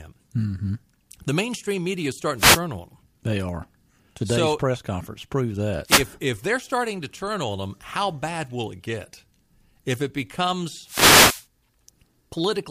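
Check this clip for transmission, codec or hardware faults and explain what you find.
Three wireless microphone noise hits break into the speech. Each is a fade in the analogue FM radio link: reflected copies of the signal cancel the direct one, so the receiver loses carrier strength and its own noise floor rises through the audio as a short swish of static. The first runs from 2.37 to 2.61 s, between "mainstream media is" and "on him". The second runs from 5.85 to 6.05 s, after "press conference prove that" and before "if they're starting to". The longest, 10.84 to 11.46 s, lasts over half a second.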